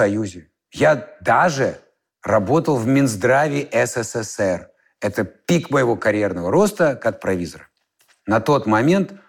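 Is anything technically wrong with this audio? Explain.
No, nothing technically wrong can be heard in this speech recording, and the signal holds steady throughout.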